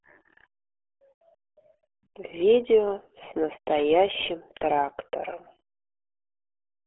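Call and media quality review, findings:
RealAudio 14.4 codec, entire clip. Speech muffled and gargly. Band confined to roughly 300 Hz to 3.4 kHz, nothing above 3.6 kHz. Heavy codec damage points to an 8 kbit/s dial-up speech coder squeezing detail out of the signal.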